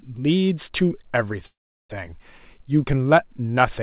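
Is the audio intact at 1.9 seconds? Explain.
No. From 1.46 to 1.92 s the sound fades into a brief buzz and then silence, resuming intact; a likely call audio freeze, where delayed packets emptied the jitter buffer.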